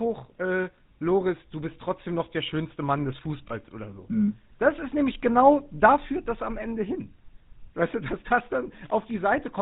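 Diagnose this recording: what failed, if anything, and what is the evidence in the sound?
The codec stage is at fault: the speech has passed through the GSM full-rate codec, which fits its 13 kbps rate. Nothing survives above 4 kHz, and the coarse pulse excitation leaves the speech plainly buzzy and gravelly throughout.

At the network stage there are lost GSM frames at 3.48 to 3.53 s, just before "oder so", and at 5.76 to 5.79 s, between "ist nämlich genau" and "führt das am". Each fits one dropped 20 ms frame. The decoder replays the previous frame's settings, which leaves a brief rough, metallic ring.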